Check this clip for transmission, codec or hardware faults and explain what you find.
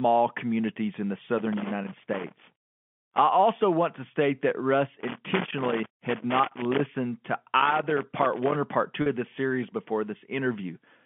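Two faults turn up: loose connector crackle in three bursts, and one short packet loss with pitch repetition near the end. All of it is heard through a narrow telephone band of roughly 150 Hz to 3.4 kHz, as G.711 mu-law coding would give.

The loose connector crackle runs from 1.38 to 3.18 s, starting after "communities in the" and ending before "also want to state". It returns from 5.00 to 6.80 s and again from 7.60 to 8.55 s, the last burst ending just before "or part". A worn or dirty contact is making and breaking as it shifts, so the signal is chopped on and off, and any DC on the line turns each break into a pop. The result is a scratchy, irregular crackle spread over one to two seconds. Its randomness and length set it apart from codec or network errors, which arrive as single clean clicks or gaps.

The packet loss with pitch repetition falls at 9.02 to 9.06 s, right after "or part" and before "of the series before". 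About 40 ms of audio went missing, which fits two 20 ms packets, and the receiver filled the hole by repeating the last pitch period. It is heard as a brief, slightly held buzz. That periodic, tonal fill distinguishes it from the connector fault, whose noise has no pitch and lasts far longer.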